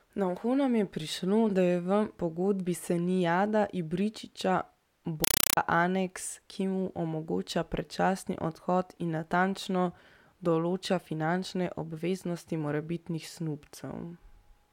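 From 5.24 to 5.57 s, a Dolby Digital stream was passed through undecoded as a compressed stream played as audio, producing loud chattering static at 31 bursts per second just before "aneks ki mu omogoča".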